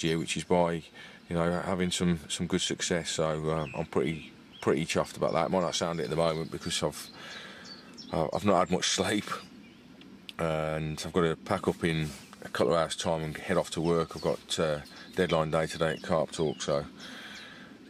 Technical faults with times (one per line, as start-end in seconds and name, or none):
none